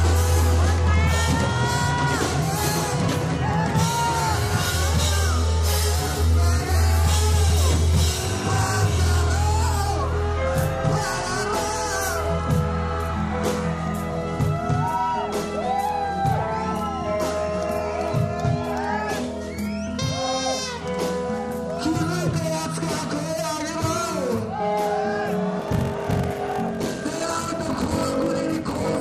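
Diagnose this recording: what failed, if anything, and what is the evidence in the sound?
A block size mismatch (padded) at the driver or buffer stage, from 25.58 s to the end. A steady 46.9 Hz buzz appears, and the audio slows to 0.861 times normal speed with its timbre unchanged, which fits short blocks zero-filled into a 1024-sample read. Random underrun gaps would be irregular and would not slow the audio steadily.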